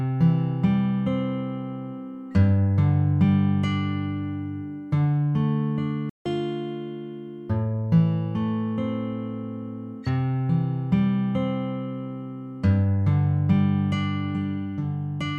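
At about 6.10 s there's a digital broadcast dropout: the receiver lost frames and muted for 160 ms, a clean gap before the sound picks up again.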